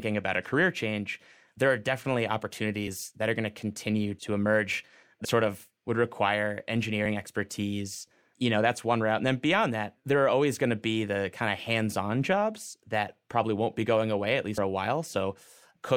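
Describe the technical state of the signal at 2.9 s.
Right after "definitely" at about 2.86 s, the speech loses a compressed frame: roughly one 26.1 ms frame goes missing, so around 30 ms of audio is skipped before "that are going to". Overlapping neighbouring frames blur the join into a short smeared blip rather than a sharp click.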